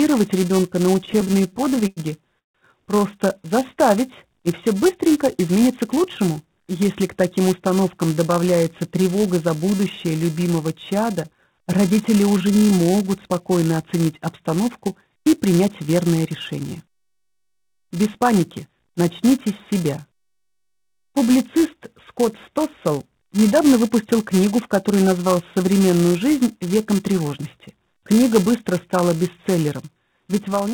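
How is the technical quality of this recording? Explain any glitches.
The recording has several audible faults, heard through band-limited audio with nothing above 4 kHz, which points to a narrowband call codec.

Throughout, a buzz at 375 Hz tracks the level: a filter restarted on every block, fitting a 128-sample block, adds a transient each time.

From 0.95 to 2.0 s the audio drags and stutters with 18 brief holds, up to 98 ms each. These are repeated stalls: the jitter buffer kept running dry and the receiver stretched the last sound.

From 2.39 to 2.58 s the sound stops for 150 ms, then resumes unchanged. This is a call audio freeze, likely from delayed packets emptying the jitter buffer.

At 5.47 to 5.88 s, 14.88 to 17.35 s and 29.49 to 29.85 s the audio sounds hurried at unchanged pitch, running at 108%, 108% and 110%. This jitter buffer speed-up trims pitch periods to cut excess delay, about a fifth of a second in the middle stretch.

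From 12.32 to 13.06 s the audio drags at 87% speed, gaining 108 ms. This jitter buffer slow-down repeats pitch periods to rebuild its reserve.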